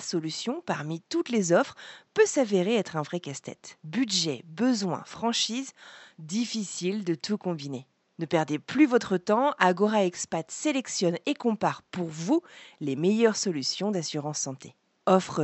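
No technical faults are audible.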